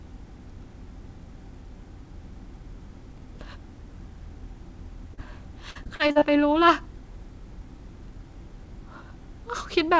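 At 5.14 to 5.19 s there is a short concealed packet loss. About 40 ms of audio failed to reach the decoder in time, and the receiver patched roughly 32 ms of it by extending the preceding sound before easing back into real signal. It is heard as a brief smear or wobble in the speech. On a spectrogram the harmonics run on unnaturally flat for a moment and then merge back. The waveform shows a stretch of near-identical repeating cycles at the seam.

From 5.71 to 6.23 s comes repeated packet loss, giving a robotic sound. Roughly half a dozen holes, the longest about 41 ms, totalling around 180 ms, are each filled by continuing the last sound. About a third of this half-second is synthetic. The speech turns choppy, with fragments missing. A spectrogram shows a row of vertical seams where harmonics freeze and restart. The waveform looks stuttered, with cloned periods between abrupt envelope changes. 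Throughout, the call path's G.722 coding leaves nothing above 8 kHz.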